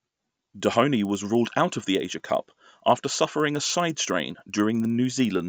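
Resampler restarted on every block, throughout this speech clip: each 50 ms block, which fits 16 kHz to 48 kHz conversion, is resampled alone, so edge errors tick at 20 Hz.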